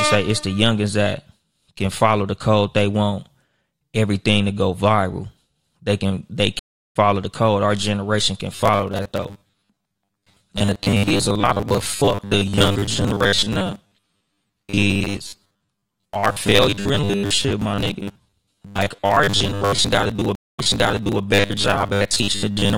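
It's a speech recording with a few problems layered on. Sample clock jitter runs through the whole thing: a faint hiss or roughness riding on the louder, brighter parts of the voice, sitting somewhere around 45 dB down and dropping away in the pauses, which fits a converter clock wobbling by a fraction of a microsecond. At 6.59 s, right after "can they", there's a stream reconnect. The audio goes silent for about 0.36 s, and when it comes back at 6.96 s with "the code", it has jumped roughly a third of a second ahead, as a live feed does when a new decoder joins mid-stream. From 8.56 s, just after "generation can", to the end, the voice turns into a rigid metallic buzz at 100 Hz that still loosely follows the speech. That's robotic sound from repeated short buffers, likely caused by the software looping 10 ms chunks while fresh audio arrives too slowly, so around half of what you hear is repeats. 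A second stream reconnect lands inside that stretch, from 20.35 to 21.23 s. It's 235 ms of silence, and then playback picks up 640 ms earlier, replaying material because the server resent a burst.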